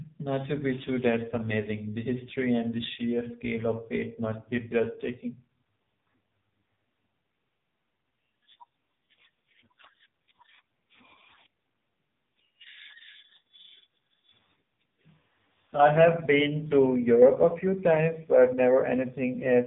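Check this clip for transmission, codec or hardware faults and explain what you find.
One fault runs through the whole recording: the speech has passed through the AMR narrowband mobile codec. The vocal-tract model with sparse pulse excitation leaves nothing above 3.8 kHz, and the heavy buzzy, synthetic texture fits a low mode of about 5 kbps. That texture, not just the missing treble, distinguishes it from simple band-limiting.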